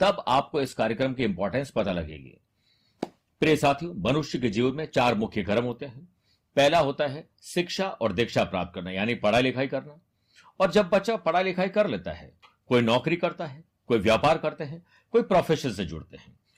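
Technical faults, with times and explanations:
0.0–6.0 s, adaptive stream starting at a low bitrate: dull, artefact-laden speech lacking treble, then a sudden gapless jump in clarity as the player steps up, which fits a move from 24 to 64 kbit/s.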